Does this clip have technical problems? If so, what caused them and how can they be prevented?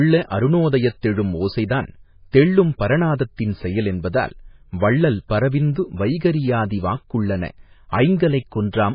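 Yes. The whole clip has a hard treble ceiling, with nothing above 5 kHz. The speech also sounds watery and swirly, with strong damage throughout. This is likely MP3 compression at a very low bitrate, which fits about 16 kbps. At that rate the encoder runs out of bits. It chops off the top band and drops weak frequency components. Those components flicker on and off from frame to frame, which causes the swirl. To prevent it, encode at a higher bitrate or keep an uncompressed copy.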